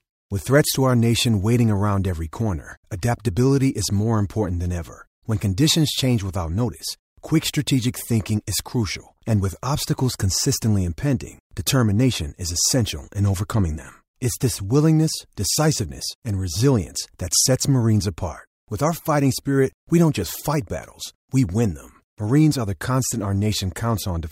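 No technical faults can be heard in the speech at any point.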